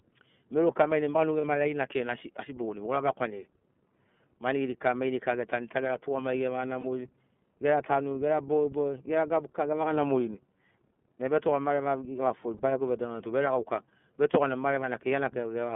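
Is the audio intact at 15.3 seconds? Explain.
No. At 15.3 seconds the speech is still running through the iLBC codec, which colours the whole clip from start to end. The band is cut to a telephone line of roughly 150 Hz to 3.4 kHz, so nothing above 4 kHz survives. The codec rebuilds each 30 ms frame's excitation on its own at a rate that fits 13.33 kbps. This leaves the voice clear but plainly rough and synthetic-sounding.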